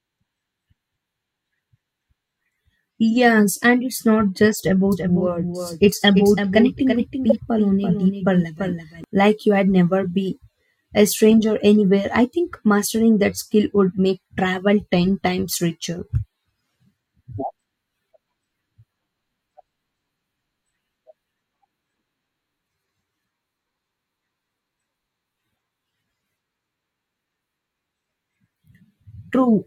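At 3.11 s a damaged compressed frame is decoded and played regardless. Misread codes push energy to the wrong frequencies, so this corrupt frame decoded comes through as a brief, fairly quiet blip.

From 4.92 to 9.04 s the speech is likely picked up a second time through a slower path, producing a doubled audio track. A dry, full-band copy runs about 300 ms behind and about 5 dB quieter, cutting in and out abruptly.

Two more corrupt frames fall inside that stretch, at 6.07–6.09 s and 7.30–7.32 s. Each is short, and the second is the loudest, peaking around -5 dBFS.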